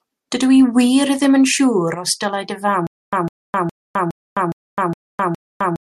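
At 1.94 s the speech drops by about 6 dB in a sudden gain jump, holding there until 2.07 s. The level steps at once rather than fading, and the background noise falls with it, which points to a gain change likely applied without a ramp.

From 2.87 s to the end, a stutter with silent gaps sets in. A 154 ms fragment repeats seven times, each followed by about 259 ms of digital silence, an even 413 ms cycle. Unlike a plain dropout, the same burst returns each time, likely a stalled stream replaying its last buffer.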